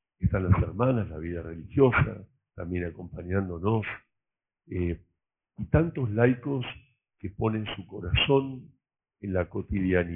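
Aliasing runs throughout: content above 3 kHz was folded back without filtering, which fits resampling to 6 kHz, leaving fairly strong gritty, metallic false tones.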